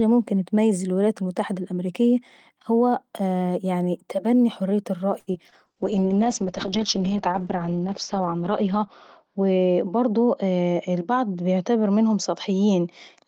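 At 5.19 s a packet arrived late and the jitter buffer ran dry, producing a short stall from a late packet: the receiver held the last sound for about 75 ms, then resumed without losing anything.

Short concealed packet loss follows at 5.33–5.36 s and 5.50–5.54 s, where about 20 ms never reached the decoder each time. The synthesized fill makes each gap a brief smear or wobble.

From 5.67 s to the end, a call bitrate drop sets in. The encoder was starved of bits, consistent with a fall from about 32 to 8 kbps, and the audio band narrows from 20 kHz to 8 kHz. The result is rough, muffled sound, at its worst for 2.35 s.

At 10.06–10.58 s, a jitter buffer speed-up trims surplus buffered audio, roughly a twentieth of a second in small pitch-period cuts. The sound plays about 9% fast at unchanged pitch and feels hurried.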